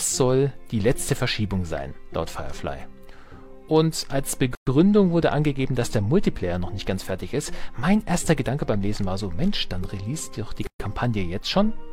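At 4.55 s and 10.67 s, six seconds apart, the sound breaks off in gaps of 119 ms and 130 ms. These are gaps at a join of encoded pieces, where encoder start delay and last-frame padding were left untrimmed. Edges are smeared, and the sound resumes where it stopped.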